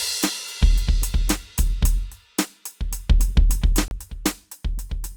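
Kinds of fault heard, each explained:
CD skip: a jolt or disc flaw knocked the laser onto another turn of the spiral, so the music drops out for about 30 ms near 3.88 s and resumes from another point. The waveform shows a brief flat gap with mismatched edges, and the spectrogram shows a thin vertical click line.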